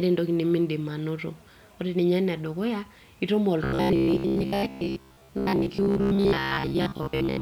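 From 3.64 s to the end of the clip at 7.41 s, new audio is likely reaching the playback software too seldom, so it fills the gaps by looping the most recent short buffer while the real audio is skipped. This is robotic sound from repeated short buffers. For most of that stretch the speech is replaced by repeats, and the steady buzz at 66.7 Hz fits a buffer of about 15 ms. The voice turns rigid and metallic, tracking the words only loosely.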